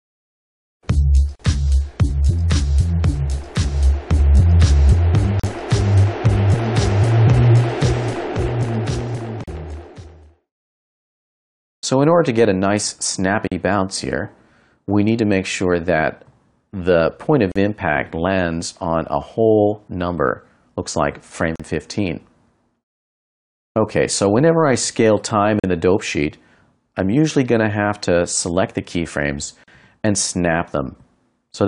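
A gap at a join of encoded pieces recurs every 4 s: at 1.36, 5.40, 9.44, 13.48, 17.52, 21.56, 25.60 and 29.64 s. Each break lasts about 40 ms. Separately encoded pieces were joined untrimmed, leaving encoder delay and padding. The sound then resumes where it stopped.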